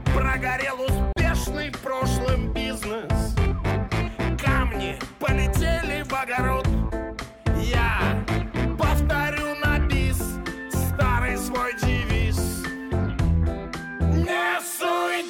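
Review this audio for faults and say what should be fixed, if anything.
A gap at a join of encoded pieces opens from 1.13 to 1.16 s, a silence of about 37 ms. Separately encoded segments were butted together with their encoder start delay and final-frame padding left in. On a waveform it shows as a flat run with abrupt, slightly smeared edges; on a spectrogram, a thin vertical blank band across all frequencies before the sound resumes where it stopped. To prevent it, trim each segment's encoder delay and padding before joining, or encode the material as one continuous stream.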